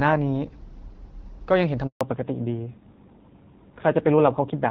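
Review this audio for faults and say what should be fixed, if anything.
At 1.87 s the call was moved between networks in a handover gap, and no speech frames arrived while the link switched. The speech drops away almost at once and stays silent for 140 ms, until 2.01 s, and whatever was said in that span is gone. Tuning handover so the new link is ready before the old one is released, a make-before-break handover, would avoid this.

From 2.01 s to the end, the call falls back to narrowband, leaving the HD Voice wideband codec for an older narrowband one at a low rate that points to AMR-NB. Nothing above 4 kHz remains, so the speech, which was clear and full before the switch, turns duller and rougher. Keeping both network legs able to carry wideband calls would stop this fallback to narrowband.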